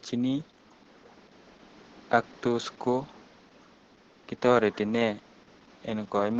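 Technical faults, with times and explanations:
Throughout, Opus voice compression: the speech is coded with SILK at about 10 kbps in wideband, so energy above 8 kHz is cut off and the excitation is coded coarsely, leaving the speech heavily muffled, hoarse and slightly robotic. A spectrogram shows a hard ceiling at 8 kHz and smeared, blocky harmonics.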